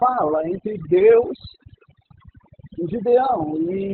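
Overdone noise removal runs through the whole of this roughly 4 s speech clip. The noise suppressor is set so aggressively that any frequency band sitting close to its noise estimate is pulled far down or switched off entirely. Along with the hiss, the softer components of the voice are removed, so the background collapses into near silence with twinkling specks. Opus voice compression is also present from start to finish, and the band stops completely above about 4.3 kHz. That narrowband cutoff, together with the heavy muffling, hoarseness and slightly robotic buzz, points to the SILK linear-prediction mode running at a very low rate, around 8 kbps. At that rate the excitation is coded so coarsely that the voice loses its natural texture and takes on a synthetic edge.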